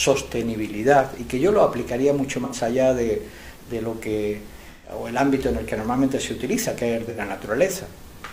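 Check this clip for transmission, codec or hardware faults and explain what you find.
There's AAC frame loss with concealment at 2.44–2.56 s, 4.70–4.90 s and 7.09–7.21 s, where the decoder patches the missing roughly 85 ms and 128 ms from the last good spectrum, leaving brief smeared, phasey gaps.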